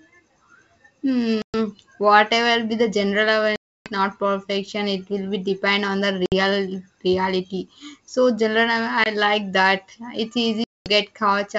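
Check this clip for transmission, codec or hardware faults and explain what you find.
Five dropouts mark the speech as packet loss on an ADPCM call. The gaps fall at 1.42–1.55 s (just before "whatever be the general"), 3.56–3.93 s (right after "whatever be the general"), 6.26–6.34 s (after "be depend on the"), 9.04–9.07 s and 10.64–10.90 s. The holes last about 120, 300, 60, 20 and 220 ms, which fits runs of roughly seven, fifteen, three, one and ten packets. Each lost stretch becomes flat silence with sharp edges. After each one, the decoder's adaptive predictor and step size no longer match the sender's, so the speech comes back slightly distorted and settles within tens of milliseconds. That recovery roughness separates it from a plain network dropout, which resumes cleanly, and from concealment, which would fill the gap instead of leaving it silent. The wideband G.722 coding itself holds up at 64 kbit/s around these gaps.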